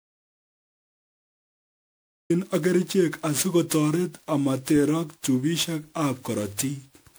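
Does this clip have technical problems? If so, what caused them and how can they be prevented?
Yes. An audio dropout to silence runs from 0.0 to 2.3 s. It is silence with no room tone, likely from a lost or muted input. Check connections and monitor levels before recording.

The speech also shows generation loss throughout. It sounds swirly, hollow and smeared, which fits repeated MP3 re-encoding around 128 kbit/s, perhaps fifteen passes. Keep a lossless master and encode only once.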